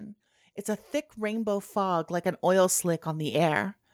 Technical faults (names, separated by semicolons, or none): automatic gain rising